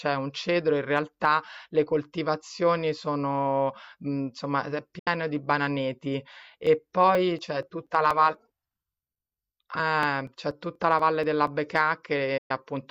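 At 4.99 s the speech fades out over about 8 ms and goes silent. This is a digital broadcast dropout. The receiver muted on bad frames, losing about 72 ms, which fits three lost frames. The sound returns at 5.07 s.

From 6.43 s to 11.47 s, periodic USB or driver dropouts tick through the speech every 0.24 s. Around twenty times, roughly 10 ms of audio is skipped outright. A blocked bus or driver causes each tiny jump.

At 12.37 s a second digital broadcast dropout fades the speech to silence. About 120 ms is lost, fitting five frames. It comes back at 12.51 s.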